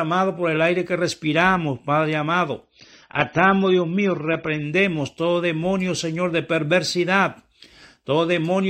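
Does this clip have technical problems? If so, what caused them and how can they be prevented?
Yes. From 2.64 to 4.64 s, just before "todo demonio", the speech turns dull and swirly, with nothing above 9.9 kHz, then snaps back without a gap. This is an adaptive stream at a lower bitrate, consistent with AAC falling from about 96 to 24 kbit/s when the connection slowed. A steadier connection or a higher minimum bitrate in the player would prevent it.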